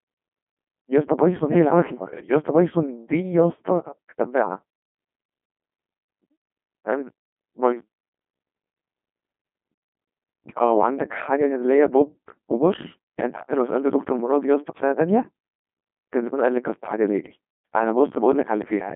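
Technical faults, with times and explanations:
Throughout, Codec 2 vocoder: only pitch, voicing and envelope survive, resynthesised from sine waves, giving heavy robotic buzz that fits about 2.4 kbit/s, nothing above 3.7 kHz.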